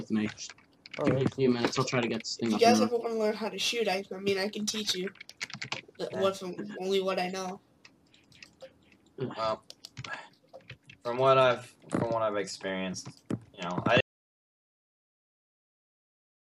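The input was likely lost at 14.01 s, an audio dropout to silence: the sound cuts off mid-flow into silence, without room tone, until the end.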